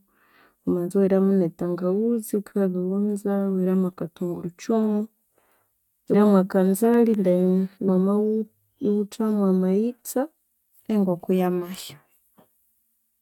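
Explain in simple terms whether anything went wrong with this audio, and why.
At 6.13 s and again at 7.87 s the speech jumps forward. These are compressed frames skipped: 23.2 ms chunks were dropped, losing about a fifth, then about two fifths, of a second.

Between 6.94 and 7.55 s come four ticks, each barely a millisecond. These are CD scratch ticks: a disc blemish destroyed samples the player couldn't fully rebuild.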